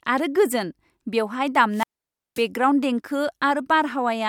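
Right after "आरो गोजोन बेवहाय", at 1.71 s, there's a wireless microphone squelch dropout. The radio link fades, hiss swells briefly, then the receiver's squelch cuts the output to near silence for about 0.53 s before the speech comes back around 2.46 s.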